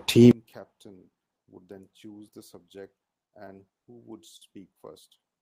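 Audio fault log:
0.31 to 5.42 s, one channel inverted. Summed to mono, the speech drops by about 29 dB and turns faint. The likely cause is reversed polarity on one stereo side, so shared content cancels and only the channel difference remains.
3.07 to 3.86 s, repeated stalls (stutter). Four brief holds, totalling 70 ms, break the flow, none longer than 30 ms. Packets arrived late, the jitter buffer kept emptying, and the last sound was stretched each time. Nothing is lost, but the speech drags.
4.36 to 4.43 s, short stall from a late packet. One sound is held about 50 ms too long. A packet came 50 ms late, so the receiver extended the previous sound until it arrived, then resumed from the same point with nothing missing.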